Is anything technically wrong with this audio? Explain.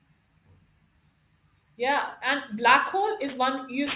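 Yes. Throughout the speech there is aliasing: the rate was cut without filtering, which fits 48 kHz to 8 kHz, so content above 4 kHz folds back, roughly 15 dB down, as gritty, metallic sibilants.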